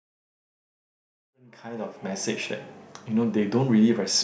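No technical faults are audible in this speech recording.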